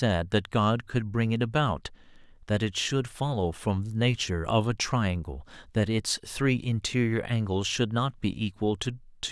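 No fault can be heard anywhere in this speech recording.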